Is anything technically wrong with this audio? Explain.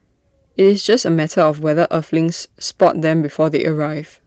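No, nothing is technically wrong: the speech comes through Opus voice compression working as intended at 24 kbps in its hybrid mode with fullband bandwidth, leaving only light coding traces.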